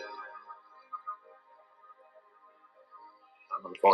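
A speech-tuned noise suppressor has been left running on non-speech audio. Throughout the clip it treats sustained, steady parts of the sound as noise and keeps pulling them down, with the gain swinging by roughly 15 dB. Onsets get through fairly intact, but anything held or decaying sinks behind them, so the sound pumps and thins rather than sitting at a stable level. Three passages are cut harder than the rest, where the noise suppressor clamps down on sound it has misjudged: 0.61 to 0.76 s, 1.37 to 1.81 s, and 2.16 to 2.77 s. In each, the level drops by up to about 6 dB relative to its surroundings. Transients within these spans come through with less loss.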